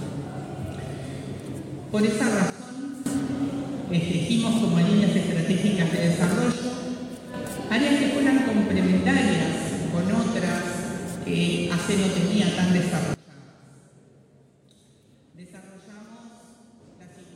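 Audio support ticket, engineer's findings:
Level drops abruptly, sound and noise floor together: 2.50–3.06 s (about 15 dB down), 6.52–7.34 s (about 6 dB), 13.14 s to end (about 24 dB). Likely sudden gain jump, unramped digital gain step.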